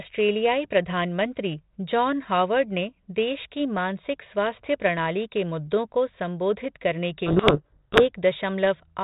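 From 7.26 to 8.06 s, right after "मुद्दों को संबोधित करने", the speech is buried under harsh, grinding distortion. This is a codec payload misread: the two ends disagree on the bit order of the 32 kbit/s G.726 code words, so the decoder reads the code word bits in the wrong places.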